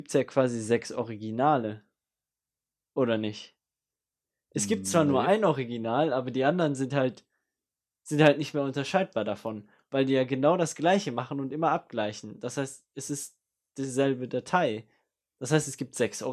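Nothing in the speech stood out as a technical fault on listening.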